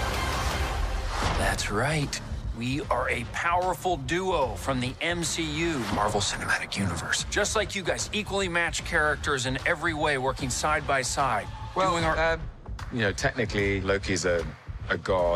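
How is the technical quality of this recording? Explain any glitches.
Nothing stood out as a technical problem or glitch on listening to the recording.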